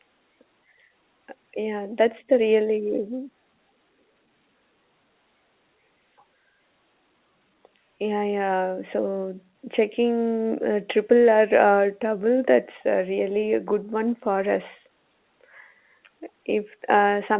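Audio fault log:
No faults are present in this speech clip, which is carried as A-law G.711 telephone coding at 8 kHz, so its band stops at 4 kHz with the faint level-following hiss that format always has.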